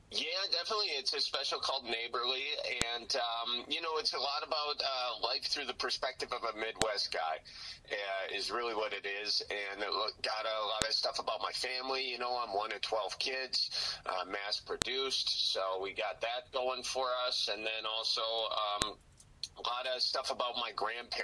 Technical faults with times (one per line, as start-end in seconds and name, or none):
2.82 file header played as audio
6.82 file header played as audio
10.82 file header played as audio
14.82 file header played as audio
18.82 file header played as audio